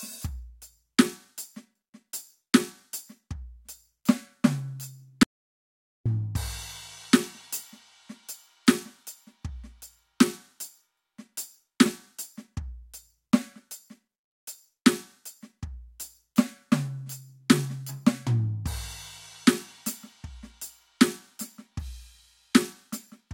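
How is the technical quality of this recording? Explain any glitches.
The recording has one clear glitch, an audio dropout to silence in the music from 5.23 to 6.06 s. The input signal was likely lost for a moment while recording continued and wrote silence. The music cuts off abruptly into total silence, with no room tone, and about 0.82 s of the performance is simply missing before it resumes mid-flow.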